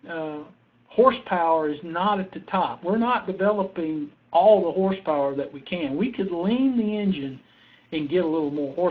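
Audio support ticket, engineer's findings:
Pre-emphasis left on from 7.21 s to the end. Top end jumps, thin and bright, sibilants spitting, about 8 dB up at 10 kHz vs 1 kHz. Looks like the CD 50/15 µs curve, de-emphasis never applied on playback. Easy fix once flagged.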